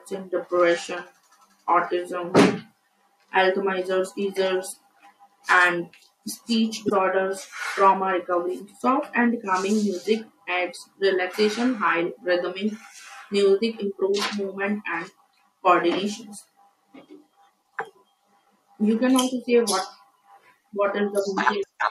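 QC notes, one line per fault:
6.86–6.91 s, 11.33–11.36 s and 21.59–21.64 s, damaged data in a compressed stream: at each point a short run of corrupted bytes reaches the decoder, which misreads or rejects the affected frames, loses sync and hunts for the next valid frame header. The speech is broken by a brief chirp, squawk, click or short hole lasting about 30 to 50 ms each time.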